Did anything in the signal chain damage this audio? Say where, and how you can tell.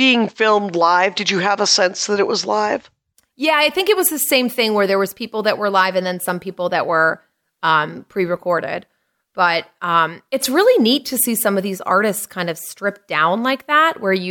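No, nothing I can hear points to damage anywhere along the chain, so there's no stage to pin it on.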